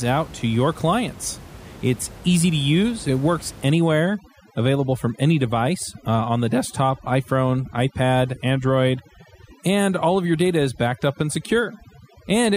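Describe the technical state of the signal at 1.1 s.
At 1.1 s the speech signal is intact, with only the room's own background noise sitting about 20 dB below the voice as part of the recording.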